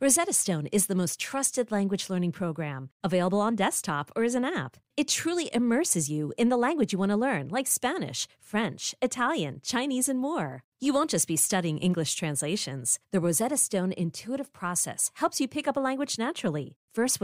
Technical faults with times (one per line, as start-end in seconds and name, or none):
none